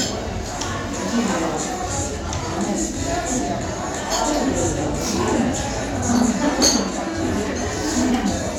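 Single sharp clicks land at 1.35, 2.16, 3.49 and 4.78 s, each a thin vertical line across the spectrum. They are likely dropped samples, where a fraction of a millisecond goes missing and the waveform jumps. Unlike a dropout, no sound audibly disappears.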